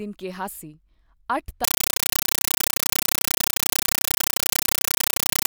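Compressed stream played as audio from 1.64 s to the end: undecoded AC-3 data, bursting for 8 ms about 31 times a second, becomes loud chattering static replacing the speech.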